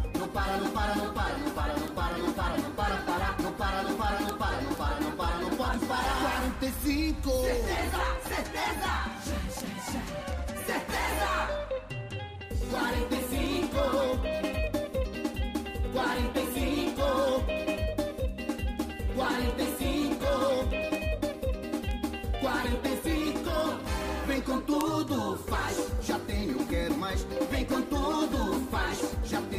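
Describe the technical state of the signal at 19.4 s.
At 19.4 s, word clock ticks sound, part of a run from 0.19 to 29.40 s. An unlocked receiver clock, roughly 100 ppm off, drops or repeats a sample about every 0.2 s.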